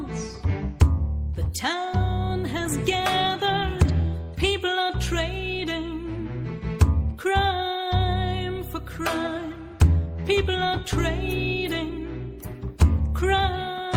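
Nothing stood out as a technical fault on listening to the clip.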